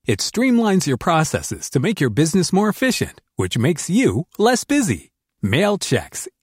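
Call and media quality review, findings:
No audible faults found in the speech, and no defect to attribute to any component of the call or media path.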